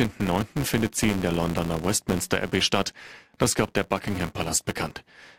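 A speech recording with a steady buzz at 200 Hz running the whole way through, rising and falling with the level of the talking. That's the classic filter restarted on every block: the state gets thrown away every 5 ms, so each block kicks off with a little transient.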